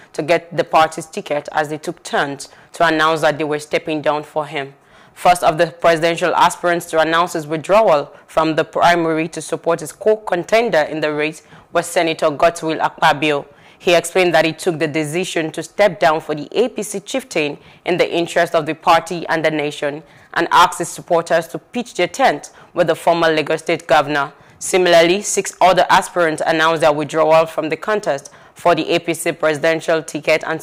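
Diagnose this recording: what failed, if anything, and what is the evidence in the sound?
Hard clipping runs through the whole recording. The signal was driven about 4 dB beyond what a stage could pass, most likely the converter or a fixed-point format conversion, so the highest peaks are sliced flat. Only a small share of the audio, around two percent, goes over, so the damage is heard as brief crackle and rasp on the loudest moments. The squared-off tops add harmonics high in the spectrum.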